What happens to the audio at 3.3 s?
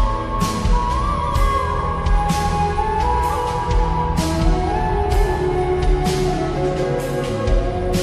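Nothing goes wrong at 3.3 s; the audio plays through that moment without any dropout, glitch or distortion.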